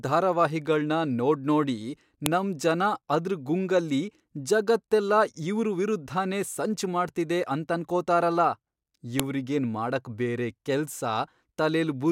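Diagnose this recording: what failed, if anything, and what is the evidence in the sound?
Sharp clicks at 2.26 s, after "ಧಾರಾವಾಹಿಗಳ್ನ ನೋಡ್ನೋಡಿ", and 9.20 s, before "ಇವ್ರಿಗೇನ್ ಮಾಡಕ್ ಬೇರೆ ಕೆಲ್ಸ": a file header played as audio, where storage-stage joins left WAV header bytes decoded as samples.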